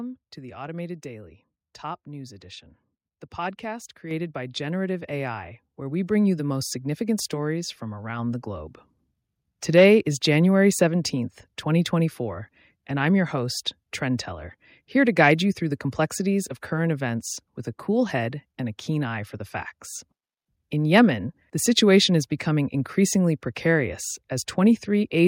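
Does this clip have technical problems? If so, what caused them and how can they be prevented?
Yes. The microphone volume is stepped up twice. At 4.11 s the level jumps by about 5 dB. At 5.13 s it rises again by about 3 dB. Each change is instant. The speech and the background noise get louder together, so the change comes from the input gain, not the talker. The call software judged the microphone too quiet and raised the device's input volume in one step each time. Disabling automatic microphone gain adjustment in the call software, and setting a suitable fixed input level beforehand, prevents these jumps.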